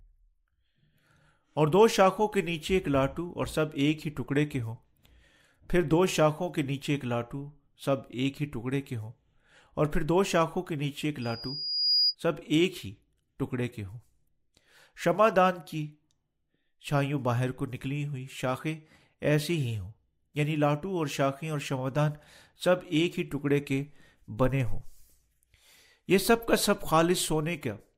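At 11.21 to 12.15 s, loudspeaker feedback squeal: a steady 4.9 kHz tone swells over roughly 0.7 s to about 5 dB above the speech. Its single pitch separates it from broadband noise.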